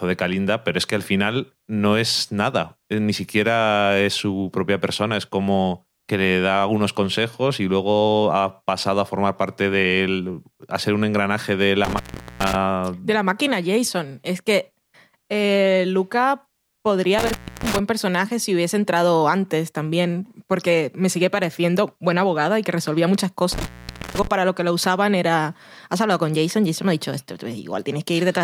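Three times the speech drops out abruptly, framed by crackle at each edge, with faint hiss filling the gap: at 11.85 s just after "ser un engranaje de", for about 0.41 s; at 17.19 s, about 0.29 s, right before "personaje si hubiese entrado"; and at 23.52 s, about 0.50 s, between "y que resolvía muchas" and "para lo que lo". This is intermittent contact, a loose plug or cable briefly breaking the signal path.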